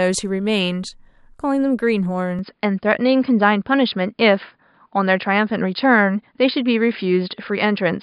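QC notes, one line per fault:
2.39 s to the end: input switched to a poorer device, likely. The speech turns dull and boxy at once, with nothing above 5 kHz. There is no gap at the switch. The level shifts by roughly 5 dB. A faint new noise floor appears, far below the speech. A different microphone or a headset's call profile would do this. It passes a narrower band and brings its own tone, gain and background noise.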